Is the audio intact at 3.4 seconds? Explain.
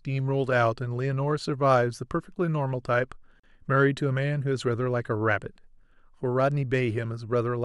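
No. A gap at a join of encoded pieces runs from 3.40 to 3.44 s, about 40 ms of silence cutting into the speech. Separately encoded pieces were joined without trimming the encoder's start delay and final-frame padding, so the silence stays in. The codec smears the edges, so the silent part is shorter, and the speech resumes where it stopped.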